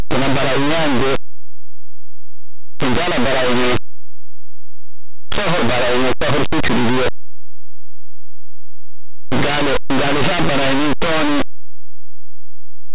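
The speech in this clip carries harsh, very loud distortion from start to finish, with the level slamming up on the quietest parts. This is linear audio read as companded. The samples were written as plain linear 8-bit values but decoded as mu-law codes. Small values just to one side of zero become the largest outputs, while the opposite side stays small. The waveform is turned inside out.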